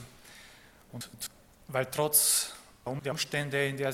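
At 1.01 to 1.27 s and again at 2.86 to 3.12 s, frames out of order: two adjacent 128 ms blocks, each of four frames, play swapped, giving a garbled flutter. Unlike a dropout or repeat, nothing is lost or duplicated, and the timing stays intact.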